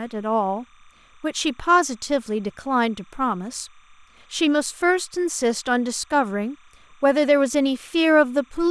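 Linear timecode from a neighbouring track or cable has leaked into this speech recording. This timecode bleed sits well below the speech throughout, as a steady chirping warble switching between roughly 1 and 2 kHz, with a rhythm that fits 29.97-frame code.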